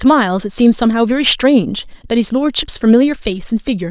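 No technical faults are audible.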